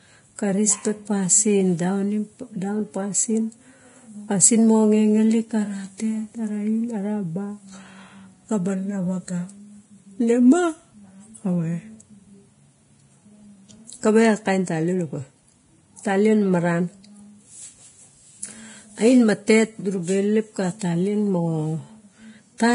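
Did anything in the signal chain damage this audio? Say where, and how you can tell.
Yes, at the codec stage: likely Vorbis compression at a low quality setting, damaging the speech heavily throughout. Nothing remains above 10.5 kHz, and the treble below that is hissy and grainy because coarse quantisation has replaced fine detail with noise. This fits a bitrate near 30 kbps.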